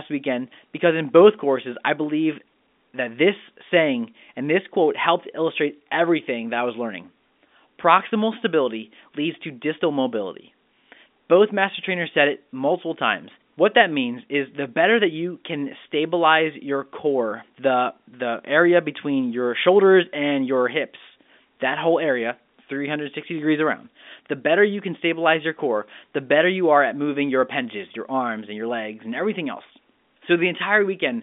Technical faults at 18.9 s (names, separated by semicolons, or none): none